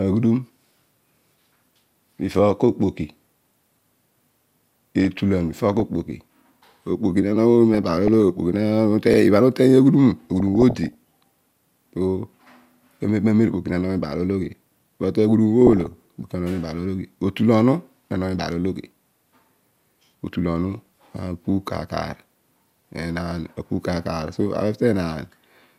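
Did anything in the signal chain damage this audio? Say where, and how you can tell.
Yes. DAB burbling from the radio reception and codec stage affects the speech at 3.15–3.94, 4.99–5.83, 7.74–8.14, 10.40–10.95, 15.67–15.94 and 20.79–20.86 s. In each burst, residual bit errors, at well under a percent, corrupt MP2 scale factors and samples, making individual sub-bands jump in level.

Overlapping chunks, a buffering fault, cause short stutters at 9.14 and 19.19 s. The 10-second spacing points to fixed 10 s processing chunks, each starting 50 ms before the previous one ended, so that 50 ms slice plays twice at every join.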